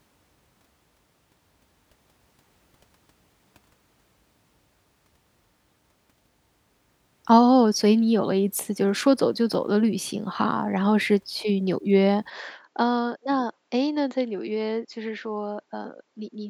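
At 12.30 s the speech abruptly turns duller and about 10 dB quieter, with no gap at the change, and stays that way to the end. This is likely an input switched to a poorer device, a different input whose narrower band and different gain take over mid-recording. On a spectrogram everything above 7.6 kHz vanishes at that moment, leaving a hard ceiling, and a faint new noise floor appears well below the voice. The waveform shows a clear step down in amplitude.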